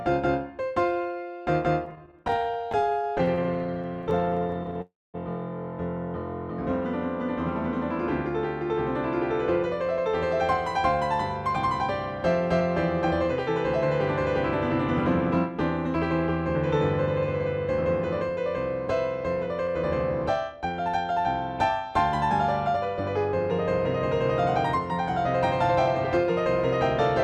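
From 1.85 to 4.77 s, repeated stalls (stutter): late packets emptied the jitter buffer about 55 times, each gap up to 23 ms and filled by continuing the last sound. The audio drags and stutters, and the spectrogram shows repeated, smeared horizontal streaks.

At 4.81 to 5.16 s, a call audio freeze: the last sound extends as a fading buzz and then drops to silence for about 0.2 s, a flat waveform stretch likely caused by delayed packets.

At 8.73 to 10.09 s, 17.52 to 21.19 s and 24.78 to 26.25 s, jitter buffer speed-up: short pitch-period pieces were removed, so the audio runs 2 to 4% fast at unchanged pitch. The waveform looks slightly compressed in time.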